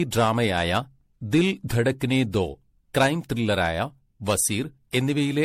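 Throughout the speech the sound is swirly, smeared and hollow, with blurred consonant onsets and nothing above 16.3 kHz, likely generation loss from about seven MP3 re-encodes that fit 64 kbit/s. A spectrogram shows a hard ceiling and flickering holes between harmonics.

From 2.97 to 3.08 s, hard clipping drives peaks about 8 dB past full scale, giving a harsh fuzz. At 5.42 s to the end, a milder overload of about 2 dB crackles. The waveform shows flat-topped peaks, and the spectrogram shows vertical smears of high harmonics.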